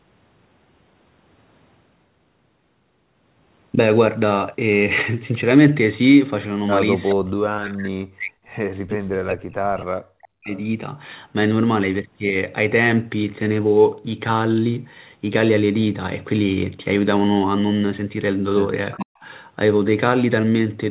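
From 7.10 to 7.14 s an echo canceller likely failed to remove the far side's loudspeaker pickup, an echo leak, so a faint copy of the voice arrives about 422 ms late, about 15 dB below the talker. From 7.14 to 10.54 s, with both sides talking, the canceller likely mistook the talker for echo and turned both down. This speech suppressed in double talk makes the voice dip and drop out in pieces for roughly three seconds, as much as about 40 dB. A second, much fainter echo leak at 10.50 to 10.61 s, about 30 dB down and again 422 ms late, likely comes from the same incomplete cancellation. At 18.93 to 19.05 s the leak is likely at its worst, a delayed copy only about 10 dB below the voice. From 19.00 to 19.25 s the canceller likely clamps down on double talk again, briefly cutting the talker by as much as about 40 dB.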